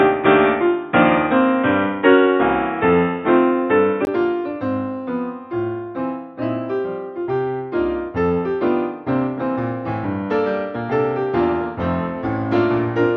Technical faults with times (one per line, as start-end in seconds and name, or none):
0.00-4.07 input switched to a poorer device